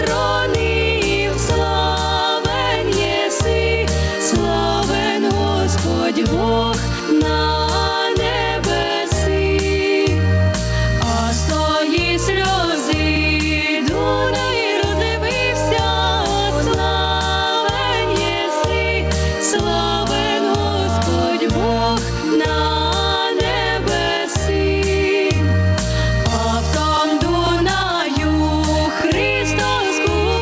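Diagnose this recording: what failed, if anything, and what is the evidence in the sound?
The input gain at the front of the call chain is set far too high for the microphone, most likely forcing a fast compressor or limiter in the call processing stage to pull the level down every time a loud sound arrives. The result is gain pumping across the whole recording, with the gain swinging by around 5 dB. Loud and quiet passages sit closer together, and the sound is squashed. Nothing above 8 kHz comes through, as expected from the G.722 call path.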